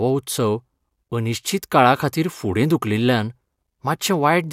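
Nothing stood out on listening to this speech recording.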